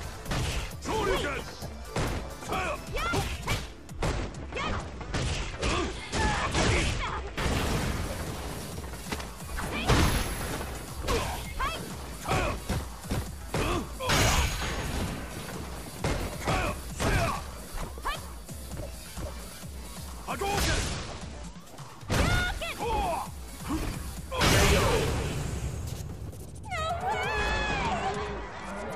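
From 4.11 to 7.37 s, 20.65 to 21.60 s, and 27.49 s to the end, a Bluetooth SBC bit pool drop occurs. The highest sub-bands lose their bits. The treble dulls and a gritty noise rises, which fits a bit pool cut from 31 to 12.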